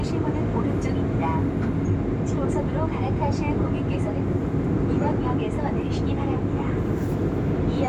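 No audible technical faults.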